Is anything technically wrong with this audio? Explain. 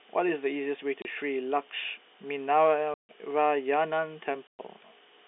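Yes, there's packet loss filled with silence. The speech, which comes through a telephone-band G.711 line, drops out completely at 1.02 to 1.05 s (30 ms), 2.94 to 3.09 s (150 ms) and 4.47 to 4.59 s (120 ms). Every gap is a multiple of 30 ms, which fits 30 ms packets going missing and the receiver playing dead silence in their place. Because the audio stops and restarts abruptly, each hole has hard edges.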